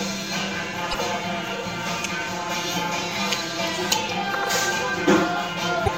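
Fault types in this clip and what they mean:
Channel delay (comb filtering): one channel arrives around 5 ms late and the two are summed to mono, so notches sit near 100 Hz and repeat at regular intervals. The hollow, phasey colour is steady throughout, unlike a comb that sweeps like flanging.
Damaged data in a compressed stream: corrupted frames make the decoder lose sync and hunt for the next header, giving short glitches at 0.90, 3.88 and 5.84 s, each about 40 to 45 ms.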